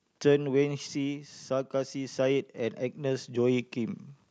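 Automatic gain falling affects this speech recording from 0.12 to 1.36 s: the gain control judged the input too loud and pulled its gain down by about 6 dB, so the voice starts loud and then sinks, with the background dropping alongside it. Automatic gain rising follows from 1.48 to 4.07 s, as the control decides the level is now too quiet and lifts its gain by about 9 dB. Voice and background swell together over those 2.6 seconds.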